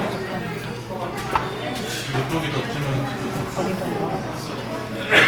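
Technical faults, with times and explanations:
Throughout, Opus compression: tones sound grainy, rough and noise-filled with little swirling, likely Opus music-mode coding at a low rate, around 24 kbps.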